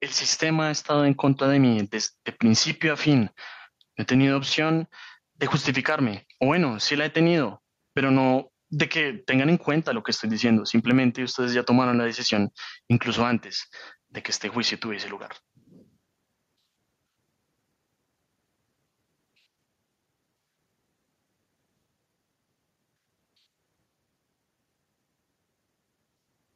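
Gain pumping runs through the whole speech recording: the gain swings by around 10 dB, ducking under each loud syllable, likely from an overdriven input held down by a fast limiter. The waveform looks flattened, with loud and soft parts closer in level.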